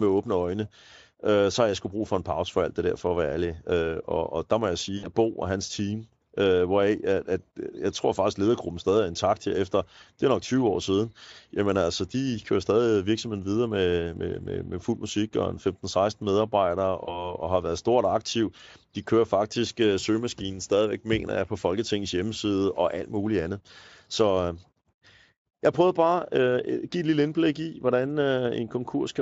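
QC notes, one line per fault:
4.97–5.07 s and 17.05–17.35 s, VoIP packet loss concealed by the speech codec: right after "og der må jeg" about 60 ms goes missing (consistent with three 20 ms frames), and just before "og har været stort" about 20 ms drops out. The decoder extends the last pitch and spectral shape at falling gain, giving a short buzzy or noisy, fading smear. Because each frame builds on the one before, the voice stays weak or distorted for tens of milliseconds or more after packets return. The Speex coding around both dropouts, at about 34 kbps, adds little or no audible damage of its own.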